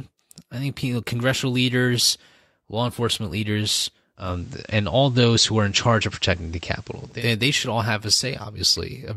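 A speech recording where, from 4.15 to 7.26 s, faint hiss rises and the level shifts by about 2 dB. It's digital radio blending to analogue: the receiver lost the digital stream and cross-faded over 227 ms to the station's FM broadcast, then back.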